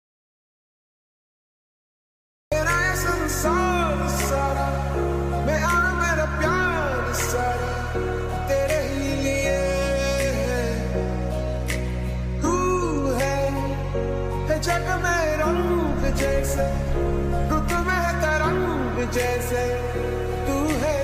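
An audio dropout to silence runs from the very start to 2.52 s. The clip opens in silence, with no room tone, and the sound begins abruptly mid-flow. The input was likely lost while the recorder kept writing zeros, so that material is gone.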